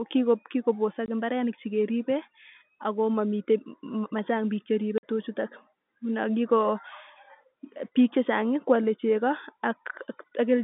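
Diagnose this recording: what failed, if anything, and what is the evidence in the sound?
Network stage: packet loss filled with silence. The audio drops to dead silence at 1.06 to 1.08 s (a 20 ms hole) and again at 4.98 to 5.02 s (about 50 ms), each with hard edges. Lost packets were replaced with silence rather than concealed. Both gaps fit a 10 ms packet size. On a waveform these are flat-line notches. A spectrogram shows blank vertical bars across the telephone band, 150 Hz to 3.6 kHz.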